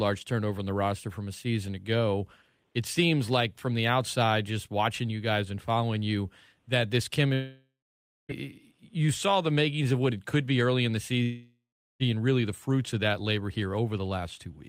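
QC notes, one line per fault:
7.33–8.32 s, long network dropout: just after "following you that this", the sound smears into a buzzy tail that fades, leaving about 0.58 s of silence before the speech resumes with roughly a second gone. The receiver likely stopped getting packets and stretched the last sound until it ran out.
11.23–12.03 s, long network dropout: after "be early in the", a similar fading buzz is followed by about 0.4 s of silence, and the speech returns at "really the fruits of" with about 0.78 s lost. This is likely another gap in arriving audio that the receiver concealed briefly before giving up.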